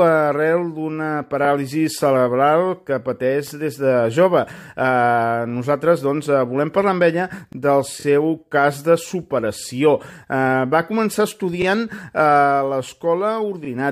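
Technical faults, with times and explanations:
7.53, 9.60, 11.62 and 13.65 s: overlapping chunks. Each chunk began 25 ms before the previous one ended, so that sliver plays twice at every join and gives a click. The 2-second spacing, with the same doubled length each time, sets it apart from the one-off stutter below.
7.99 to 8.04 s: repeated frames. A single 23.2 ms block, the length of one compressed frame, plays two extra times, adding 46.4 ms and giving a brief triple stutter. It happens once, off the 2-second chunk grid.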